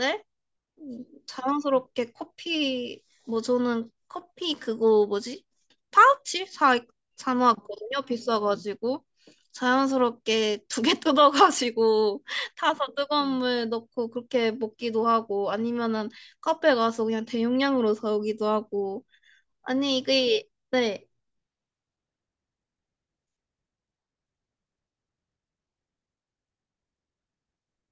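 Nothing in the recording stood out as a technical problem on listening.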